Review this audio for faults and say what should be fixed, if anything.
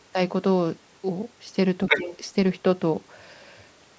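Between 1.87 and 2.17 s, a second voice comes through, roughly as loud as the main speech: the other side's voice leaking through. The talker's device plays the far end on a loudspeaker. The microphone picks it up again. The echo canceller failed to remove it here, which is the likely cause. The call microphone processing is audible as the band stopping at 8 kHz. Prevention: use a headset or tune the echo canceller so it suppresses far-end residue.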